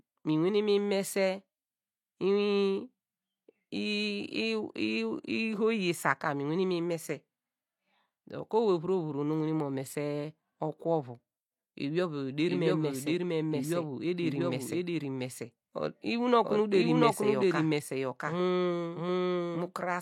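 From 12.49 s to the end, the speech is joined by a second full-band copy of itself about 0.7 s behind, at roughly the same loudness, with no decay or room colour. This doubled audio track likely comes from the signal being captured again through a slower path.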